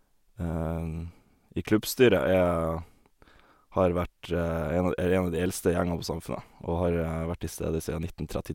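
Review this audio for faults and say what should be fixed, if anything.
There are no faults to fix in this audio, so nothing needs to be changed.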